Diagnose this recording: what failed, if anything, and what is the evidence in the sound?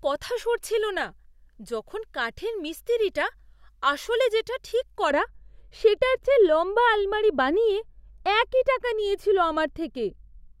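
From 5.11 s, right after "আসলে যেটা ঠিক", the speech turns dull and muffled to the end at 10.6 s. It is a case of de-emphasis applied wrongly: a treble-cut filter in the processing stage slopes the top end down, about 11 dB lower at 10 kHz than at 1 kHz.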